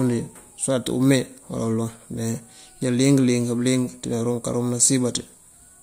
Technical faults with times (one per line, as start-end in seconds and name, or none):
none